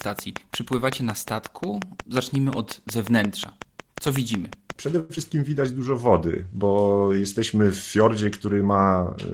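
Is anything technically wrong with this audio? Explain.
Yes, the speech carries three distinct faults, all within the first five and a quarter seconds.

Train of clicks, from 0.01 to 4.71 s. A steady ticking sits over the speech and through its pauses: about thirty near-identical clicks at a regular 5.5 per second, peaking around 15 dB above the speech itself. The even spacing and uniform shape point to a repeating external pulse, likely interference from nearby equipment or a faulty connection or power supply, rather than anything in the recorded sound.

Short stall from a late packet, from 4.99 to 5.12 s. A packet failed to arrive on time, so the jitter buffer ran dry and the receiver held the last bit of sound for about 99 ms until the data turned up. Playback then resumed from the same point, so nothing is lost. Instead, a sound is drawn out unnaturally, with a faint buzzy or dipping quality, and everything after it runs about 99 ms later.

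Skip ahead, from 5.15 to 5.20 s. Just after the stall, playback jumps forward to catch up, cutting the added delay by roughly 50 ms. Around 70 ms of speech is dropped, enough to clip part of a syllable. Only a brief 13 ms patch joins the two sides, so the cut is heard as an abrupt, slightly jerky splice rather than a gap.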